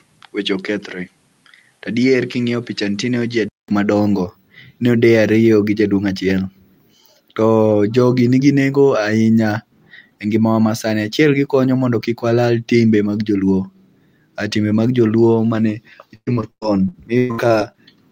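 Speech, with two faults. From 0.0 to 3.68 s the input sounds as if it was switched to a poorer device, likely a different microphone. Nothing is heard above 13 kHz, the level drops by roughly 5 dB, a new noise floor sits well below the voice, and a 200 ms silence marks the switch. Because the tone, noise and level all change together, this is a device change rather than a codec narrowing the band. From 16.15 to 17.78 s, right after "mag joluo mane", repeated packet loss gives a robotic sound. Eleven holes, the longest 120 ms, are each patched by stretching the preceding sound, so roughly a third of that stretch is concealed. Because the breaks come in quick succession, it sounds choppy rather than like one isolated dropout.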